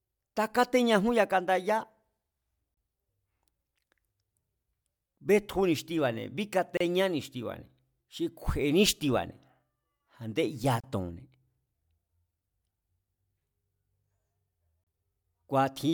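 At 2.74, 6.77, 10.80 and 14.84 s the speech drops out for about 32 ms, a gap at a join of encoded pieces. The 4-second pieces were joined with the encoder's start delay and end padding left in, so each join holds a short silence with smeared edges before the speech resumes where it stopped. A spectrogram shows thin blank vertical stripes, and the waveform shows brief flat stretches.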